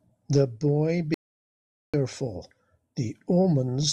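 At 1.14 s the speech cuts off mid-flow and the audio drops out to silence until 1.94 s, a gap of about 0.79 s. The silence is total, with no room tone or background hiss, and whatever was said during that stretch is missing. The likely cause is a momentary loss of the input signal while recording continued to write zeros. On a waveform it appears as a flat line; on a spectrogram, as a solid black band across all frequencies.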